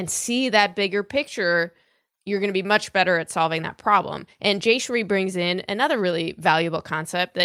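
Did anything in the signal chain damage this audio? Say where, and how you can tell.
No, nothing in the signal chain damaged this audio, and there is no stage where a fault can be heard.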